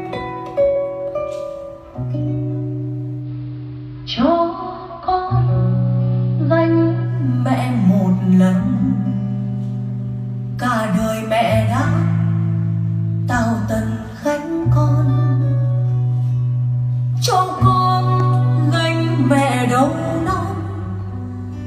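From 3.17 to 7.15 s the sound turns dull, with faint hiss well below the signal: digital radio blending to analogue AM over a 124 ms cross-fade.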